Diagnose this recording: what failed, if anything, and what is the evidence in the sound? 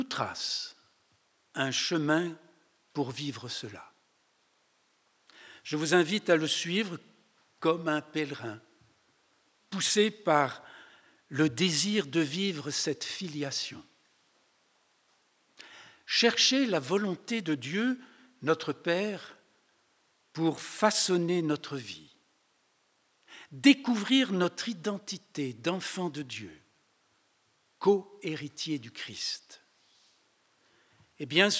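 Nothing failed: no stage in the chain, from wiring and conversion through processing, transmission, storage and playback, leaves any audible defect anywhere in the recording.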